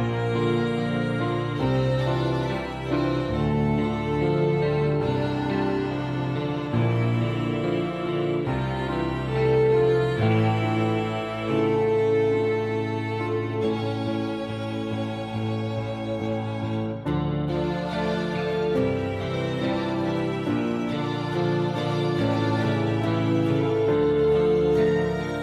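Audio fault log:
No faults are audible anywhere in the recording. Nothing in the playback is cut, repeated, stretched or disturbed at any point.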